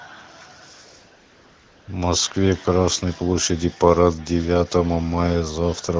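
From 0.73 s to 1.87 s there is a stretch of AMR comfort noise lasting 1.14 s. The sending phone treated this span as silence and stopped transmitting speech frames, so the receiver generated its own noise from a rough description of the background level and spectrum. The real room sound gives way to a smooth, steady hiss that switches in and out abruptly at both edges. Around it, the AMR wideband (HD Voice) codec carries the speech cleanly, with light coding damage that fits a rate of about 12.65 kbit/s.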